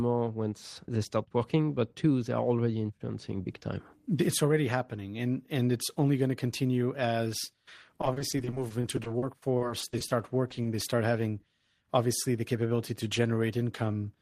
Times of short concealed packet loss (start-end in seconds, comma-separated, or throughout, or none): 10.48-10.66